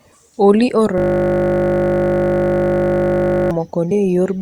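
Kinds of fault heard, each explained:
System hang loop: From 0.98 to 3.51 s the speech turns into a steady buzz at 50 Hz. One 20 ms slice repeats exactly, over and over, because the system stalled while the sound hardware kept replaying the same short ring buffer.
Compressed frames skipped: At 3.90 s the speech jumps ahead by around 50 ms. Whole compressed frames were lost or rejected by the decoder.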